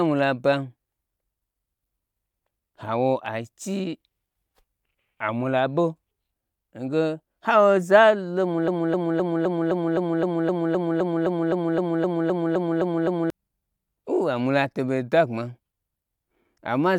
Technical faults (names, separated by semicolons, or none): broken-record loop